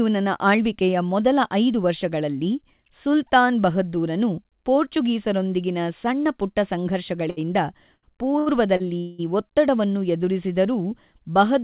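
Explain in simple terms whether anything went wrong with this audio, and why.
A few hiccups in the speech. At 7.30, 7.95, 8.39 and 8.77 s there are short stalls from a late packet: the last sound gets held for 30 to 80 ms, then the speech picks up where it left off. The 8.39 and 8.77 s ones land just before "ಒತ್ತಡವನ್ನು ಎದುರಿಸಿದರೂ". At 8.98 to 9.20 s there's a longer hold of about 0.2 s with a fading buzz or hiss rather than silence. That's a call audio freeze, likely from packets held up on the way. Again, nothing is lost; the speech just resumes late.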